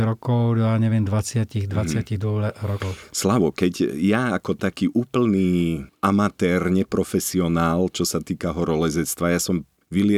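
Speech recording; no technical faults audible anywhere in the clip.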